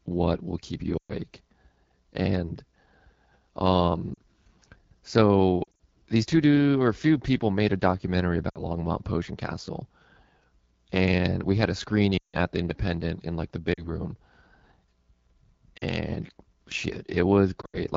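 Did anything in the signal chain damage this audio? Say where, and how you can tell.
Yes. Damage came from the codec stage. Speech passed through the AMR wideband (HD Voice) codec at a rate that points to one of its lowest modes, around 8.85 kbit/s. The coarse pulse coding leaves the speech rough and raspy throughout the clip.

The radio link and network stage show lost AMR speech frames at 0.97–1.13 s, 4.14–4.18 s, 5.64–5.79 s, 8.50–8.64 s, 12.17–12.36 s, 13.73–13.88 s, 15.77–15.83 s and 17.61–17.81 s. These gaps run 40 to 160 ms, and the lost frames around 5.6 s and 17.6 s are scattered in short runs. Corrupted frames failed their checksum, so the decoder repeated the last good pitch and vocal tract settings with falling gain. This produces warbles and quick fades to silence, and the speech comes back weak or rough afterwards.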